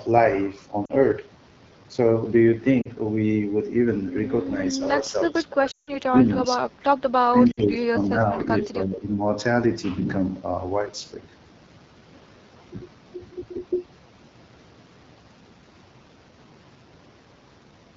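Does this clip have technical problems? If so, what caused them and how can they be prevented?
Yes. The whole clip runs through the AMR wideband (HD Voice) codec at a low rate; the roughness points to roughly the 8.85 kbit/s mode. At that rate the codec has too few bits to model the excitation pulses and vocal tract shape accurately below 6.4 kHz, and the band above is filled with synthetic noise. The speech sounds plainly raspy and grainy throughout. Giving the call a higher AMR-WB mode, 12.65 kbit/s or more, prevents this.

Lost AMR speech frames cause brief dropouts at 0.85 to 0.91 s, 2.82 to 2.88 s, 5.71 to 5.92 s and 7.51 to 7.62 s. Each time the radio link corrupted frames, the decoder discarded them and kept repeating the last good pitch and vocal tract settings at falling gain. The short gaps, about 40 to 60 ms and fitting two or three lost 20 ms frames, drop to near silence within two frames. 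The 160 ms gap at 5.71 s drops to near silence within two frames, and the voice comes back weak or rough for a moment. Better radio coverage and stronger channel error protection prevent these losses.

Speech suppressed in double talk shows up at 5.0 to 6.12 s, 6.28 to 6.68 s, 8.14 to 8.49 s and 8.66 to 9.19 s. The likely cause is both ends talking at once, so the echo canceller could not tell this talker from loudspeaker echo and turned the signal down. The level sinks by up to about 20 dB in the first stretch, less later, with the sound thinning or breaking up in pieces. A better-tuned echo canceller with reliable double-talk detection prevents this.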